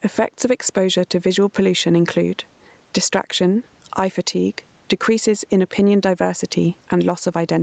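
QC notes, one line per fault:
Throughout, gain pumping: the gain swings by around 10 dB, so loud and soft parts sound squashed together. The likely cause is input gain set far too high, with a fast limiter clamping every peak.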